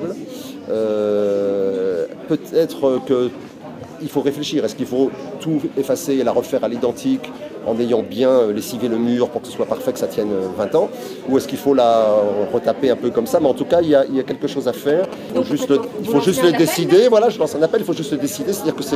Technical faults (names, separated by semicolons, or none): GSM signalling bursts